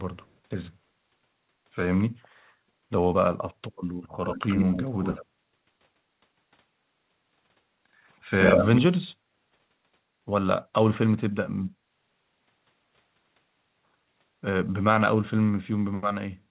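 An echo canceller on a loudspeaker end likely let part of its microphone pickup through, causing echo leak: a copy of the speech trails 76 ms behind from 4.25 to 4.86 s, 5.02 to 5.25 s and 8.31 to 8.81 s, at about 5, 10 and 0 dB below the speech. The canceller then gated the background, cutting the room sound by about 14 dB for roughly a tenth of a second at 9.16 to 9.28 s and about 16 dB for a bit longer at 11.73 to 11.88 s. All of it is band-limited to 4 kHz, which fits a G.711 mu-law call path.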